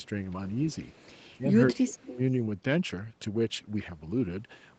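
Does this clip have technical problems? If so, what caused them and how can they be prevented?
Yes. Speech suppressed in double talk runs from 1.71 to 2.2 s: the talker's level dips by around 35 dB, likely because the echo canceller, facing both sides at once, couldn't separate this talker from loudspeaker echo and attenuated everything. Tuning the canceller for better double-talk handling, or using headsets, prevents this.

An echo leak appears from 1.96 to 2.17 s as a faint copy of the speech, delayed by 197 ms and about 30 dB below it. The far end's canceller likely left residual loudspeaker pickup, which was sent back. Better acoustic echo cancellation or headphones on that end would stop it.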